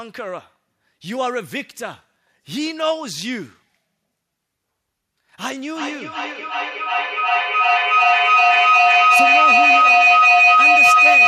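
Feedback howl starts at 5.59 s and lasts to the end. A speaker-to-mic loop gains each trip, building a tone near 3 kHz, about 13 dB over the speech.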